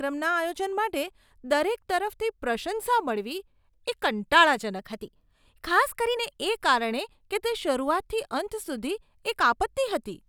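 Speech with a wrong sample rate from 4.79 to 6.17 s: playback runs 1.09 times fast, fitting 44.1 kHz audio played at 48 kHz, so the voice hurries and rises 1.47 semitones.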